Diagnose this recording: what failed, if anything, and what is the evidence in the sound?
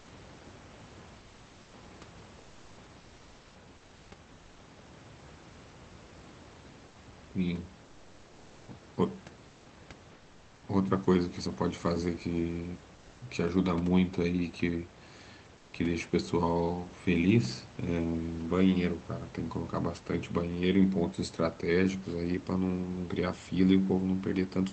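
Call-processing stage: comfort noise in place of the background in the pauses between speech at 1.19–1.73, 2.39–2.77, 2.99–3.55, 4.33–4.59, 6.87–6.95 and 15.57–15.73 s. In each gap the room's textured background, about 26 to 28 dB below the loud passages, gives way to a smooth, featureless hiss about 2 to 5 dB quieter. The likely cause is Opus discontinuous transmission: the sender stops sending audio during the pauses, and the receiver plays synthetic noise in its place.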